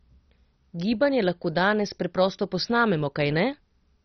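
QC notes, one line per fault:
Throughout, MP2 compression: the speech is dull, with nothing above 6.1 kHz and a heavy gurgling, granular roughness as upper sub-bands flicker on and off, likely from a starved MPEG Layer II encode that fits about 32 kbps. A plain low-pass would be dull but clean, without this grain.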